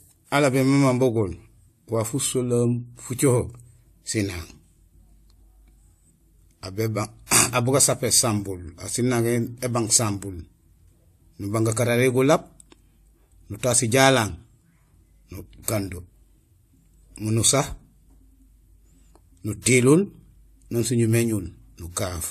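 Speech, with nothing above 14 kHz for its full length and two kinds of codec artefact heard together: the first codec's artefacts, which a second encoder has re-coded and added to. The likely cause is transcoding between lossy codecs, sounding like low-rate AAC-LC followed by WMA 1 at roughly 96 kbit/s.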